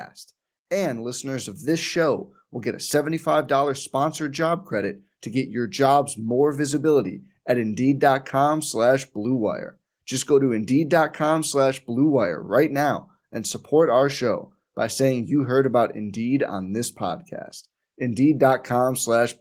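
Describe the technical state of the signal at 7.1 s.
Automatic gain rising runs from 0.84 to 7.37 s. The gain control judged the input too quiet and climbed about 6 dB, so voice and background swell together.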